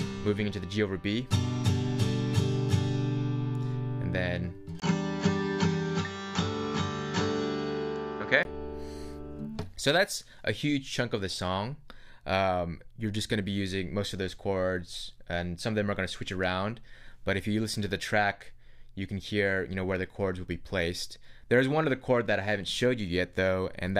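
From 4.8 s to 8.45 s the system most likely switched its input to a poorer device, such as another microphone or a headset running its call profile. That device passes a narrower band, so nothing above 7.6 kHz comes through and the sound turns duller and boxier. A brief 20 ms gap marks the changeover, the loudness stays about the same, and a faint new background noise sits well below the signal until the original input returns.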